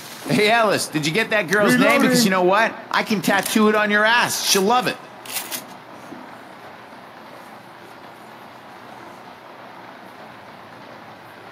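No technical faults can be heard in this audio.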